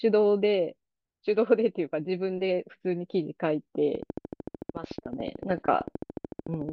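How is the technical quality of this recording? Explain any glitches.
The recording is marred by one clear glitch in its second half. From 3.95 to 6.70 s a train of clicks ticks steadily over the speech at 13.5 clicks per second, about forty in all, likely from electrical interference or a faulty connection or power supply injecting near-identical pulses. Each peaks a little above the speech, so it stays audible through pauses. A waveform shows evenly spaced needle spikes, and a spectrogram shows regularly repeating thin vertical lines.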